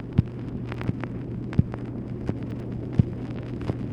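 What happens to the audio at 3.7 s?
Nothing goes wrong at 3.7 s; the audio plays through that moment intact, with no audible fault.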